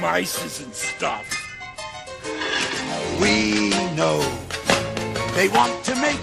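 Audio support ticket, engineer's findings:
Bluetooth SBC bit pool drop, 0.56–4.16 s and 5.59 s to end: link congestion cut the encoder's bit budget, which fits bit pool 31 falling to 12 (about 88 kbps). Treble dulls and gritty quantisation noise rises.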